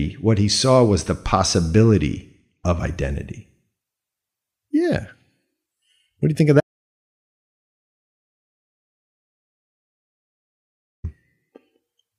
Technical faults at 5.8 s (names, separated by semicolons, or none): none